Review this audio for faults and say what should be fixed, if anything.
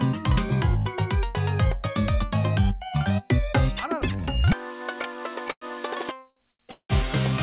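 Two call audio freezes occur, from 5.51 to 5.64 s and from 6.71 to 6.92 s. In each, the last sound is carried on as a fading buzz and then drops out, for about 60 ms of silence in the first and about 90 ms in the second. The audio then resumes where it stopped, so nothing is lost, but the timeline is pushed back by about 104 ms and then about 180 ms. The likely cause is packets held up in transit until the jitter buffer ran dry. To prevent this, fix the network congestion or route delay upstream and let the jitter buffer grow adaptively when arrival variance rises.

Two short stalls from late packets fall between the freezes, at 6.30 to 6.39 s and 6.51 to 6.62 s. Each time, a packet missed its playout slot, and the receiver stretched the preceding sound for about 60 ms and then about 78 ms before continuing from the same point. The result is a briefly held sound with a slight buzz or dip rather than a gap, and nothing is missing. 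To prevent this, keep the jitter buffer target deep enough to cover the observed packet arrival variation. The narrowband G.711 A-law path, with nothing above 4 kHz, carries the audio throughout.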